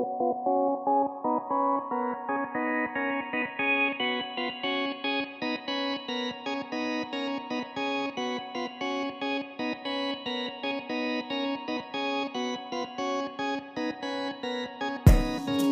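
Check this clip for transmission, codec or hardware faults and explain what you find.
Nothing to report here, as far as I can hear the audio comes through without any fault worth flagging.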